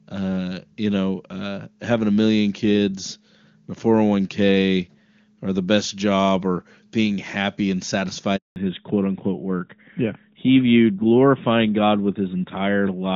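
A speech clip with a handover gap at 8.36 s. The sound cuts out for 200 ms, until 8.56 s, because no speech frames arrive while the call switches networks. Right after, there is a fallback to narrowband. Up to 8.36 s the audio is clean HD Voice, consistent with AMR wideband at its top rate. From 8.56 s to the end, nothing above 4 kHz remains. The sound turns duller and rougher, as the call drops to the older AMR narrowband codec.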